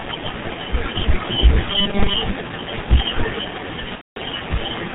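The whole speech clip passes through the G.723.1 codec at 6.3 kbit/s, heavily damaged: nothing above 4 kHz, a muffled, hoarse tone, and smeared consonants. From 3.95 to 4.18 s, VoIP packet loss concealed by the speech codec stretches the last sound into a fading buzzy tone or coloured noise that is muted from the third lost frame, across a gap of about 210 ms, which fits seven lost 30 ms frames.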